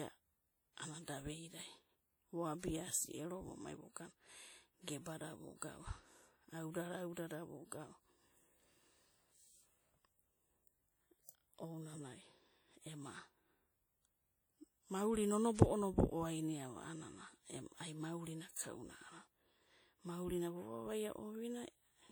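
Throughout the speech there is a ringing, washy quality, with a hiss that rises and falls with the speech. This is plainly audible codec damage, most likely from WMA compression: a transform codec working in long blocks, consistent with a low bitrate of around 48 kbps. Its quantisation noise is smeared across tens of milliseconds, and weaker spectral detail is discarded.

Pre-echo appears at three attacks: 2.59 to 2.63 s, 15.55 to 15.59 s, and 18.51 to 18.56 s, just after "ai maurina". Each time a brief hiss leads the onset by 42, 41 and 48 ms respectively. The codec spread noise scaled for the loud attack across the whole block, including the quiet moment before it, so the attacks sound softened and smeared.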